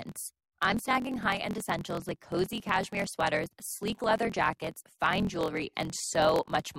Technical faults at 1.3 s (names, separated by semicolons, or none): block size mismatch (truncated)